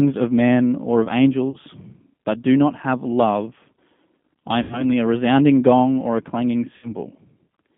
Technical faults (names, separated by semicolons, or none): G.729 codec; VoIP packet loss concealed by the speech codec